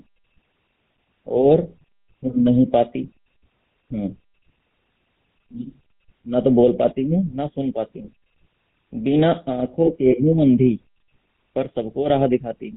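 The speech is heard through the GSM full-rate codec for the whole clip. Nothing above 4 kHz survives. A coarse pulse excitation drives a vocal-tract model, leaving a plainly audible buzzy, gravelly roughness. The damage fits a 13 kbps mobile-phone link.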